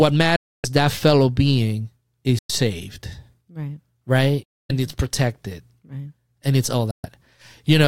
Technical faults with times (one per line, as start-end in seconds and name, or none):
0.36-0.66 Bluetooth dropout
2.39-2.51 Bluetooth dropout
4.43-4.71 Bluetooth dropout
6.91-7.06 Bluetooth dropout